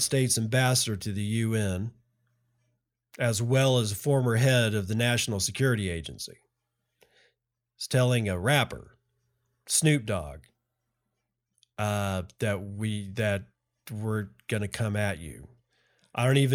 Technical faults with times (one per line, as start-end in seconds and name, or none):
none